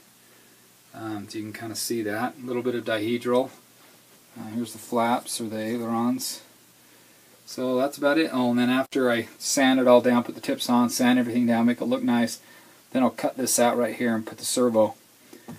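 At 8.86 s the audio cuts out through an intermittent contact, a loose cable or plug briefly losing connection. The signal drops for about 56 ms, with a short crackle at each edge as the contact breaks and remakes, and the disturbance clears by 8.93 s.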